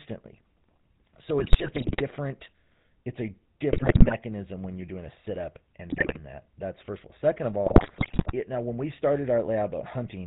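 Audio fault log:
Throughout: GSM full-rate codec. Speech is band-limited below 4 kHz, with plainly audible buzzy, gravelly roughness from pulse-driven vocal-tract modelling at 13 kbps.
1.39–2.02 s, 3.72–4.13 s, 5.90–6.19 s, 7.66–8.33 s: GSM bit errors. Corrupted filter, pitch and gain values distort the spectrum and level frame by frame, breaking speech into squawks, pops and gargling.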